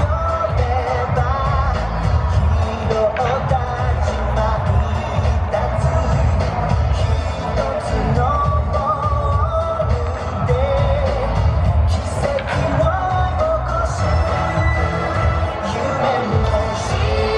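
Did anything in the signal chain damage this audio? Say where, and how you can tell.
No, nothing along the way seems to have hurt this one, and I can't hear any point where the chain gets in the way of the sound.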